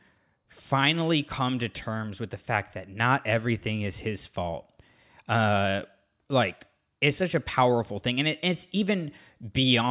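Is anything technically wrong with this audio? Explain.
No, nothing technically wrong turns up anywhere in this speech recording.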